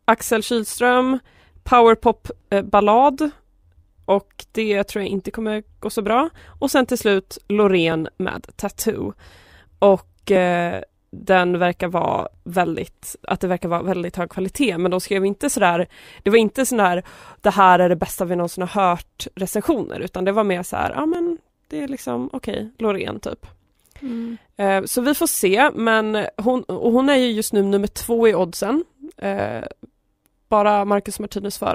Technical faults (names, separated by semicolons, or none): overlap between stream segments